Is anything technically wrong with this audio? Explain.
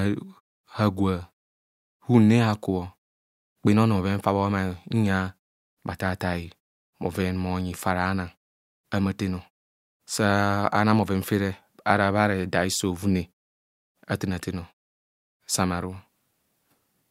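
No, nothing technically wrong can be heard in this speech audio.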